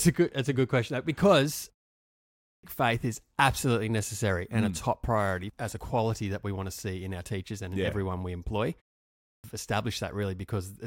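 Clipped start after a pause at 2.25 s and 9.11 s: after silences of about 0.59 s and 0.38 s, the output seems to doze off, swallowing roughly 380 ms before "faith is absolutely necessary" and 330 ms following "yeah everyone we employ".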